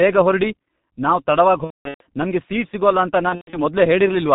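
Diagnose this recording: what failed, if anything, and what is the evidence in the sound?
G.723.1 codec, throughout: the whole recording passes through a low-rate telephony codec, and the damage is heavy. Nothing is present above 4 kHz, so the speech is muffled. Its voice model updates only once per 30 ms frame, which leaves vowels hoarse and consonants smeared together. The muffled, hoarse sound fits the 6.3 kbit/s mode of G.723.1. This is a codec-stage fault in the call's encoding, not a problem in the capture.

VoIP packet loss concealed by the speech codec, 1.64 to 2.01 s and 3.29 to 3.58 s: at these points the network dropped packets and the decoder filled the gaps. In the first gap, about 330 ms went missing across 360 ms, with one unbroken run of 210 ms. It ends just before "ನಮ್ಗೆ ಸೀಟ್". In the second gap, 180 ms were lost across 240 ms, with a 120 ms run. During each gap the decoder extended its last pitch and filter into a fading sound, muted from the third lost frame in a row. 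Because every frame builds on the one before, the speech stays weak for a while after packets resume.

Hard clipping at 4.34 s: in the final instant, the signal overdrives a gain or conversion stage by about 3 dB. Its peaks are cut flat, which adds a brief crackle of high harmonics right at the end of the clip.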